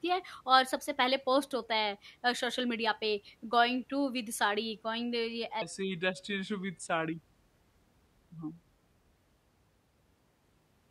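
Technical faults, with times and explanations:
5.62 to 9.15 s, section at the wrong speed: the speech suddenly drops deeper and drags, with every syllable stretched and the pitch sinking by about four semitones, then snaps back to normal at 9.15 s. The stretch runs at 0.783 times the original speed, so pitch and timing fall together rather than separately. This likely comes from that stretch being played back or resampled against the wrong clock rate, slowing it without any pitch correction.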